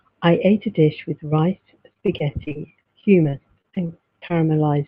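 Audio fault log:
1.93–4.32 s: repeated packet loss (robotic sound); frequent gaps of up to 30 ms are patched by stretching the preceding sound, leaving choppy speech with pieces missing.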